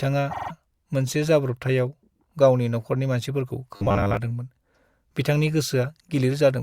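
Around 0.30 to 0.51 s there's repeated frames: a 48 ms block plays four extra times, adding 192 ms, so you hear a quick stutter. Then from 3.76 to 4.17 s the speech goes robotic, a rigid metallic buzz at 100 Hz, likely from 10 ms buffers being looped while most of the real audio is skipped.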